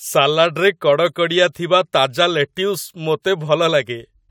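No technical faults can be heard anywhere in the recording.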